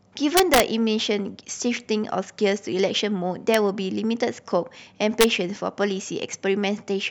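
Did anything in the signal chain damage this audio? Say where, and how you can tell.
Yes. Integer overflow in a fixed-point gain or sample-format conversion stage. Loud speech peaks crack violently from 0.37 to 0.60 s, at 3.54 s, and from 5.21 to 5.24 s. Peaks up to about 2 dB over full scale wrapped to the opposite sign instead of being limited.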